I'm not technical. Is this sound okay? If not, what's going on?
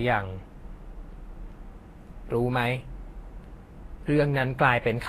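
No. Throughout the speech there is plainly audible Vorbis compression damage: the treble sounds hissy and grainy, consonant edges are smeared, and nothing is heard above about 14.2 kHz. This is likely from saving the file at low quality, which discards fine high-frequency detail.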